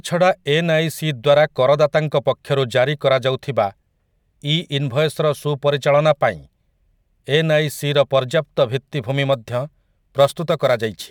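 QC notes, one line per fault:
9.33–11.1 s, crude rate conversion: samples repeated without filtering, likely from 44.1 to 48 kHz, leaving inharmonic fizz about 30 dB below the speech.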